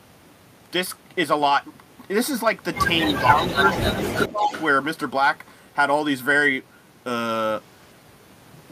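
From 3.06 to 3.21 s, and again from 3.39 to 4.64 s, an echo canceller at the loudspeaker end likely failed to remove what its microphone picked up. The result is an echo leak: a copy of the speech returns about 250 ms late, sitting roughly 10 dB below the direct sound. Overlapping this, speech suppressed in double talk occurs at 3.22 to 3.59 s, 3.77 to 4.12 s and 4.29 to 4.51 s. With both sides active, the canceller likely mistook the talker for echo and turned them down too. The speech dips in short patches, by a few dB in the first two and by around 10 dB in the last.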